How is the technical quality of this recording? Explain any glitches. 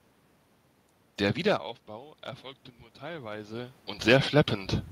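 The recording has one audible glitch, a gain swell in the second half of the speech.

Automatic gain rising, 3.0 to 4.4 s: the input dropped by about 15 dB, so the automatic gain control slowly raised its gain by about 5 dB. Voice and room noise swell together over that stretch rather than jumping at once.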